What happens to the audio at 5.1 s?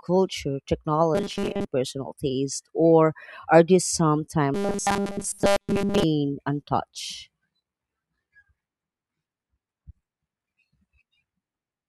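Robotic sound from repeated short buffers covers 5.1 s, running from 4.54 to 6.03 s, just after "or are there some". The speech becomes a rigid metallic buzz near 200 Hz throughout that span, likely from fresh audio arriving too seldom so a roughly 5 ms buffer is replayed.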